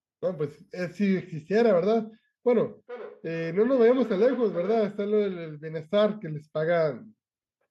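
From 2.7 to 4.98 s there is feedback echo between two devices: a second device in the room replays the call and the microphone catches it again. The speech returns roughly every 0.4 s, about 16 dB below the direct sound, appearing as fainter, time-shifted copies of each syllable on the spectrogram and waveform.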